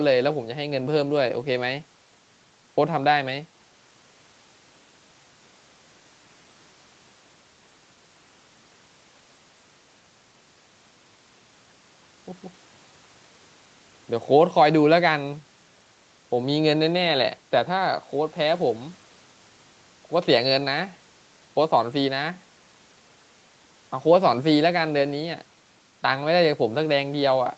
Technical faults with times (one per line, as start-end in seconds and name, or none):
none